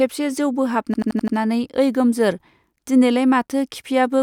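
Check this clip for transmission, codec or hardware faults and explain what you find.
One fault, a system hang loop, from 0.94 to 1.37 s. The driver or computer froze while the sound hardware kept cycling its ring buffer, which fits a 4096-sample buffer. A single 85 ms slice of speech repeats five times, giving a machine-gun stutter at 11.7 Hz.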